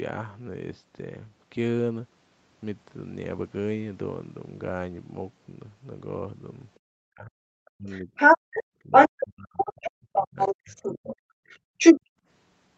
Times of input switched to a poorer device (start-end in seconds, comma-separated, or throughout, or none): none